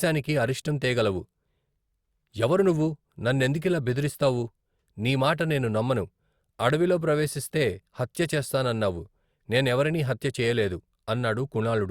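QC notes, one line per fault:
No faults found.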